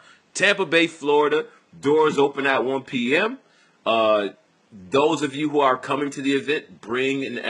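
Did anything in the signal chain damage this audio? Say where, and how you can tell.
Yes. From 1.11 s to the end, the speech suddenly drops in quality as codec artefacts rise, with no gap. That is the codec stage of an adaptive stream at a lower bitrate, consistent with a switch from 96 kbit/s AAC to 12 kbit/s HE-AAC. The faint room noise, about 41 dB down, is part of the recording.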